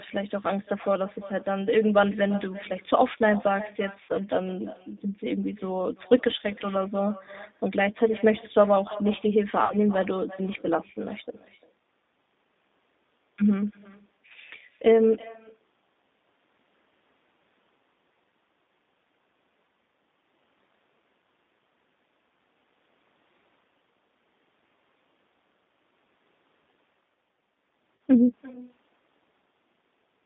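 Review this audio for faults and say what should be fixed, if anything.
Every sentence is shadowed by a quieter, thinner copy about 21 dB down and about a third of a second late. This is echo with no canceller: the far end's loudspeaker feeds its microphone. Enabling acoustic echo cancellation at the far end would remove it.

The sound is narrow, roughly 200 Hz to 3.7 kHz, with a rough, synthetic grain throughout. That points to the G.729 codec, likely running at 8 kbit/s. Using a wideband codec such as G.722 or Opus would preserve more bandwidth and naturalness.

Brief, fading smears occur at 4.03–4.12 s, 9.64–9.77 s and 27.97–28.00 s. This is VoIP packet loss concealed by the speech codec, which extrapolated across gaps of about 60 ms, 60 ms and 40 ms. Better network quality of service or forward error correction would prevent it.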